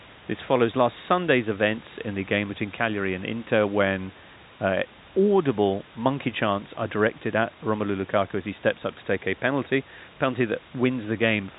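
There are no technical faults to describe in time order in this speech.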